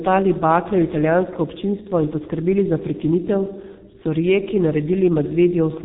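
G.723.1 codec damage runs throughout the speech, and the heavy coding fits a low rate of around 6 kbit/s. Nothing reaches above 3.8 kHz, so the sound is muffled. The codec's slowly updated voice model leaves a hoarse, rough texture and smears consonants.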